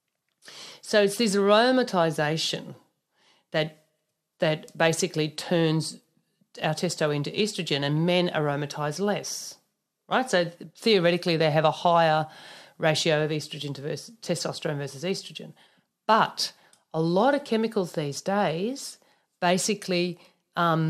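From 16.18 to 16.30 s there is DAB burbling: weak reception let bit errors, around a third of a percent, slip past error correction into the MP2 data. This fits five corrupted frames, with wrong samples putting short blips of noise into single sub-bands. It is heard as short blips of noise over the speech. On a spectrogram it shows as isolated rectangular blocks of energy in narrow bands.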